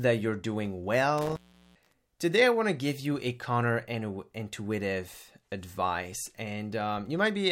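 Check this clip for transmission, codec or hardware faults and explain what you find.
One hardware fault is present: an intermittent contact from 1.18 to 1.94 s, just after "you're doing". A loose connection briefly opens the signal path, so the speech drops out for about 0.39 s, with crackle at each edge and faint hiss while open.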